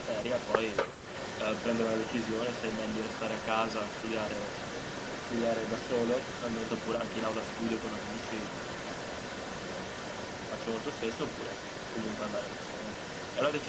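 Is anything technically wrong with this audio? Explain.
Yes. An echo leak runs through the whole clip. A delayed copy of the speech trails it by about 0.24 s, roughly ten decibels quieter. The likely cause is a loudspeaker on the far end whose echo canceller let its microphone's pickup slip back into the call.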